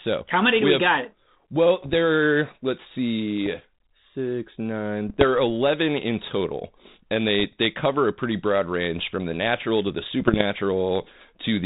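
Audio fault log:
1.79–1.95 s, 3.46 s, 5.07–5.24 s, 7.40–7.53 s, 10.20–10.43 s: bit errors on an ADPCM link. Pops and rough bursts with quick level jumps, because each flipped bit throws off the decoder's step size and predictor, so the damage rings on briefly.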